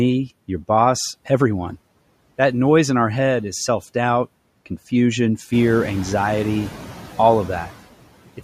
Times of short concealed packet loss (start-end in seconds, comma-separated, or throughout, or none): none